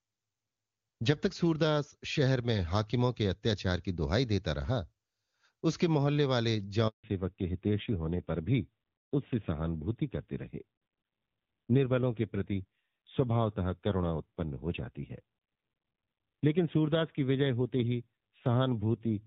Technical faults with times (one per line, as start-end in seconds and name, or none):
6.88-7.04 handover gap
7.04-19.27 fallback to narrowband